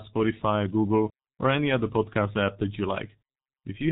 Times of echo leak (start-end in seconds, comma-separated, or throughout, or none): none